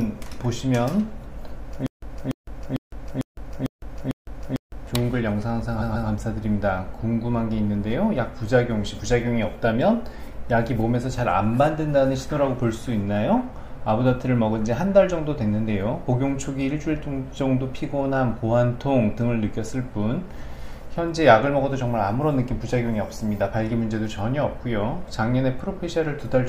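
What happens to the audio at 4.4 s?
At 4.4 s the playback is inside a stutter with silent gaps running from 1.86 to 4.87 s, likely caused by the player or stream stalling and replaying its last buffered fragment at each retry. The same 289 ms burst of sound comes back seven times at a steady 450 ms pace, each repeat followed by about 160 ms of dead digital silence, and whatever should have played across those three seconds never arrives.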